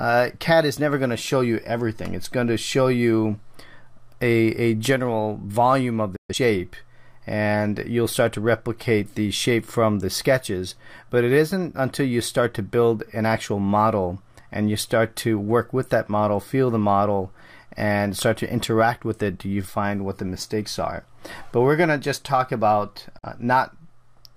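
Digital broadcast dropouts at 6.16 to 6.35 s and 23.18 to 23.28 s break this audio: the receiver lost valid frames and muted, with an 8 ms fade into silence each time. The gaps sound like roughly three and one lost 42.7 ms frames, and that audio never returns.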